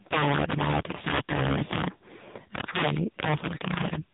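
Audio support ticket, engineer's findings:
Integer overflow, throughout. Violent cracks on loud speech peaks, far harsher than clipping. The gain stage is driven about 14 dB too hot, and a few percent of samples exceed full scale. Those peaks wrap to the opposite sign instead of saturating. Suspect an unclamped fixed-point sum.

AMR narrowband mobile codec, throughout. Band-limited, with nothing above 3.8 kHz. Buzzy, synthetic speech from the pulse-excited vocal-tract model. The damage is heavy, which fits the low 5.9 kbps AMR-NB mode, with too few pulses per subframe. Suspect a 2G/3G leg in the call path.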